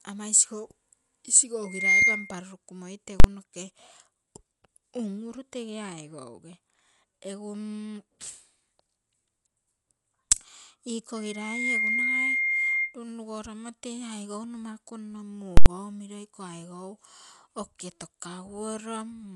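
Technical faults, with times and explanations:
Throughout: Dolby Digital compression, likely at around 64 kbps, with nothing above 11.4 kHz. The encoder has narrowed the band and starved many frequency lines of bits, filling them with noise, so the speech sounds dull, with a rough, fluttery haze around it.
1.64–2.43 s and 11.16–12.97 s: loudspeaker feedback squeal at 2.1 kHz. The mic is hearing its own speaker, and that frequency keeps going round the loop and growing. The first swells in over about a third of a second to roughly 15 dB above the speech; the second takes about half a second and sits around 10 dB over.
3.20 s and 15.57–15.66 s (right after "aigou nomaku nno"): invalid numbers at full scale. A calculation blew up, and a whole block got pinned at maximum level, 43 ms the first time and 85 ms the second, which fits 2048- and 4096-sample blocks. Each one comes across as a harsh, very loud bang.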